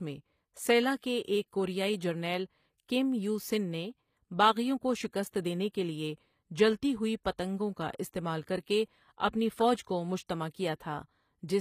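From start to finish the treble of this speech sounds not quite real. The s sounds come across gritty and lisping, and nothing at all sits above about 15.5 kHz. That points to HE-AAC compression as the likely cause, at a low bitrate of roughly 24 kbps. The codec codes only the lower spectrum and rebuilds the top by copying lower bands upward under a coarse envelope, so the upper harmonics no longer line up with the ones below.

At 7.24 s a short burst of hiss runs just ahead of an attack, lasting about 16 ms, and the onset itself sounds softened and smeared rather than crisp. This is pre-echo. The transform codec spread its quantisation noise across the whole block, and because the sharp attack landed late in that block, noise sized for the loud part spilled into the quiet moment before it.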